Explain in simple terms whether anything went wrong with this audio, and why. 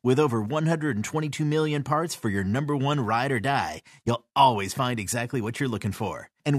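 At 4.07 s, compressed frames skipped: about one 23.2 ms block of speech never played, so the sound jumps ahead.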